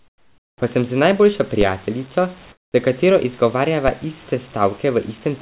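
Speech heard through a narrowband call path, with nothing above 4 kHz, consistent with a G.711 A-law link at 64 kbps. From 0.0 to 0.62 s and again from 2.52 to 2.74 s the real room background gives way to comfort noise in place of the background: a smooth, featureless hiss about 17 dB and about 16 dB quieter than the ambience it replaces. This points to the sender's discontinuous transmission halting packets during the pauses while the receiver synthesises noise, most likely RFC 3389 comfort noise. At 1.61 s a DC step shifts the waveform's zero line, producing a brief low thump. The offset then drains away at the rate a 20 Hz high-pass filter would pull it back to centre.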